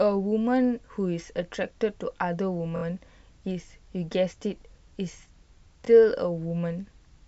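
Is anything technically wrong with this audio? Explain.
Yes, there are two repeated buffers. When fresh audio missed its deadline, the device replayed its last block, about 23 ms long (which fits a 1024-sample buffer). At 2.76 to 2.83 s it repeats three extra times, and at 5.85 to 5.88 s once. Each repeat gives a brief stutter with hard joins.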